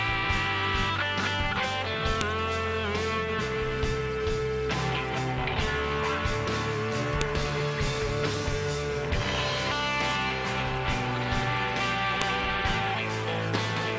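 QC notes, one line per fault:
2.21 s, 7.21 s, 12.22 s: file header played as audio. Each of the three events is a sharp, loud click lasting only a couple of milliseconds. They recur every 5.0 s regardless of what the sound is doing. The regular spacing points to 5-second WAV pieces joined or streamed without their headers stripped, so the few dozen header bytes at the start of each piece are read as sample values. Those bytes bear no relation to the waveform, and they produce an abrupt step that is heard as a snap.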